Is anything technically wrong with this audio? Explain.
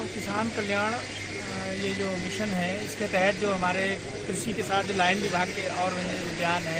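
No, nothing technically wrong is audible here.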